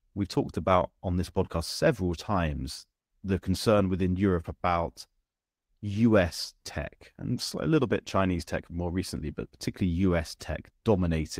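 Listening to this speech recording, nothing stood out as a technical problem at any point.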